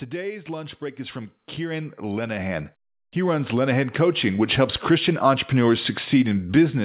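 From 0.46 s to 5.31 s the automatic gain rises: the gain control judged the incoming level too low and kept raising its amplification over nearly five seconds, about 15 dB in all. The speech and the background noise beneath it swell together, so the room seems to creep closer as the talker gets louder, with no sudden jump. Throughout, the telephone-band sound with nothing above 4 kHz fits G.711 call coding.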